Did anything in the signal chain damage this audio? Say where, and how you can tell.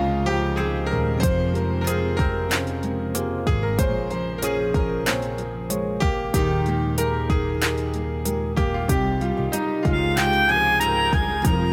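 Yes, at the converter: there's sample clock jitter for the whole clip. A grainy hiss rides on the sound, getting rougher on loud, bright passages and dropping away in the gaps. An unsteady clock, wobbling by around two microseconds, mistimes each sample, leaving an error roughly 35 dB down.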